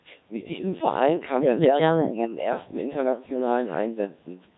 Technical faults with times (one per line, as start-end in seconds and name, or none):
0.00-4.57 Codec 2 vocoder
0.38-0.62 bit errors on digital voice radio